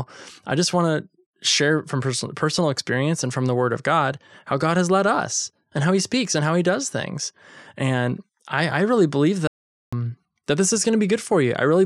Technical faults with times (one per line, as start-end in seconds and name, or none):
9.47-9.93 audio dropout to silence